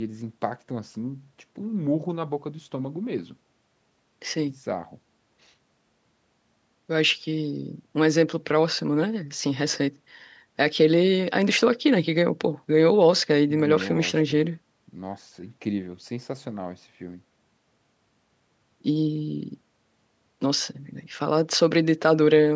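A speech recording that has passed through call microphone processing, with nothing technically wrong with it.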